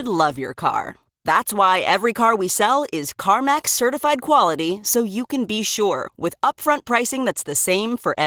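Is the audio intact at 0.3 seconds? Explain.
No. Opus voice compression spans the whole clip, coarsely coding speech at what sounds like about 16 kbps, leaving it muffled, hoarse and slightly robotic.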